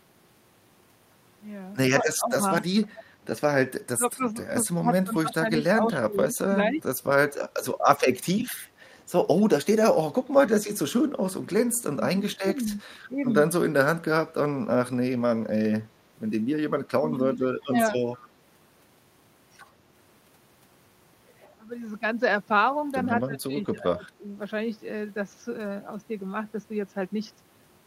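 A speech recording in which the talker's level repeatedly sinks, between 2.02 and 6.84 s, 11.75 and 18.01 s, and 21.63 and 24.35 s, by up to about 20 dB, for roughly two seconds, one second and one second in total. This is speech suppressed in double talk, likely an echo canceller ducking everything while the far side also spoke. On a waveform these are sudden envelope dips, and the spectrogram shows thinned or missing upper harmonics there. An echo leak also appears, a faint copy trailing the voice by 189 ms. It runs from 2.97 to 10.6 s at about 20 dB below the speech, and again from 17.62 to 18.28 s at about 30 dB below. Its likely cause is a loudspeaker end whose canceller let residue through. A spectrogram shows ghost harmonic bands repeating the voice 189 ms later.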